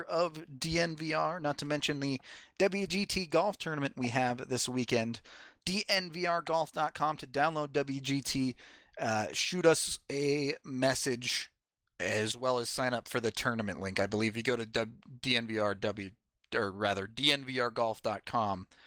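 The speech has passed through Opus voice compression at 20 kbps in hybrid mode, which keeps the full bandwidth and leaves only a light trace of coding, and no technical fault can be heard anywhere in the signal.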